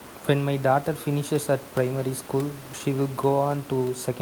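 Listening to the speech turned up nothing that stood out, with only a steady room noise sitting about 19 dB below the voice.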